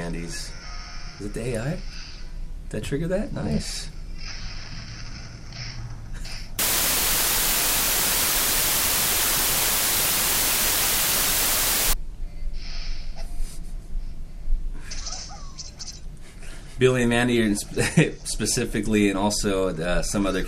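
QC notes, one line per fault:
6.59–11.93 s, low bit depth with dither: the signal was reduced to only 3 bits, with dither added before rounding, so the coarse quantisation error turns into a steady, even white hiss, about 5 dB louder than the sound itself, without audible distortion.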